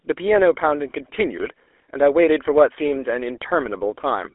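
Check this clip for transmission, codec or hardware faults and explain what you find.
The clip has one fault, present for its whole length: GSM full-rate codec damage. The speech passed through the original GSM speech coder, which fits a rate of 13 kbps. It models the vocal tract as a filter and excites it with a sparse, regularly spaced pulse train that keeps only a third of the excitation samples. The sound is squeezed into a telephone band of 300 Hz to 3.4 kHz, with nothing above 3.6 kHz, and carries a plainly audible buzzy, gravelly roughness.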